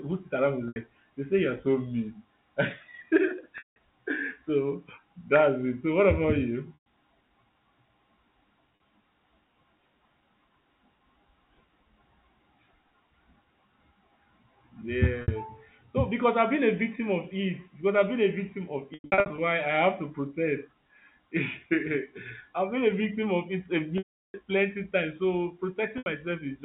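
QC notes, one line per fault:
0.68–26.06 s, packet loss with pitch repetition, eight dropouts: 0.68–0.76, 3.58–3.76, 6.74–6.85 (after "so what about you"), 8.76–8.80, 15.22–15.28, 18.94–19.38 (after "been a victim of", scattered, longest run 100 ms), 23.98–24.34 (before "plenty times"), 25.98–26.06 s. Lost spans run 40 to 360 ms, which fits 20 ms packets. The receiver loops the last pitch period, so short gaps sound held and buzzy. Longer gaps fade to silence over the narrowband telephone sound.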